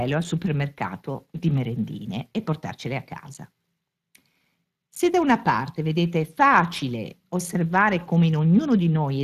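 From start to finish the speech carries Speex codec damage, and it's plainly audible. Speex is a CELP coder: it models the vocal tract and spends its remaining bits on the excitation signal, so anything it can't afford comes out as a grainy, hoarse edge over the whole clip. The amount of damage fits a setting of around 22 kbps. Nothing comes through above 15.3 kHz, so the very top of the band is simply gone.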